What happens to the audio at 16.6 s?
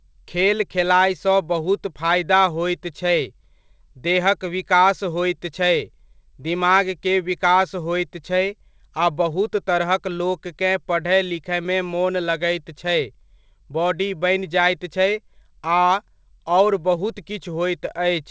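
Nothing goes wrong at 16.6 s: the speech passes through cleanly, with only the ordinary band-limited character of the call path, where nothing reaches above 8 kHz.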